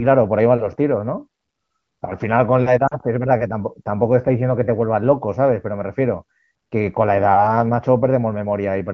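At about 2.87 to 2.98 s there's a short stretch of lost AMR speech frames, roughly 40 ms, which fits two 20 ms frames failing their checks. The wideband decoder holds the last good pitch and spectrum while quickly fading the gain, so you hear the sound drop to near silence before it comes back weak or rough for a moment. The light HD Voice coding at 15.85 kbit/s stays in the background.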